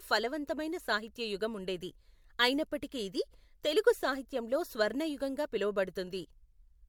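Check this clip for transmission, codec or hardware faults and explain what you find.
One codec fault runs through the whole clip: generation loss. The speech was likely decoded and re-encoded about three times with MP3, each pass requantising on a shifted frame grid. The errors stack into swirly, hollow smearing and softened consonant attacks, more than a single 96 kbit/s encode would cause.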